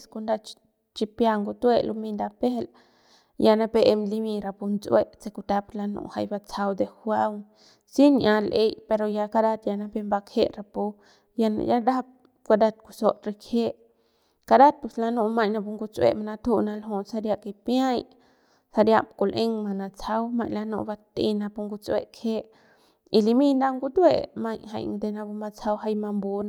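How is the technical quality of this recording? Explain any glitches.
Nothing in the speech here catches the ear as a technical glitch, so there's honestly nothing to explain.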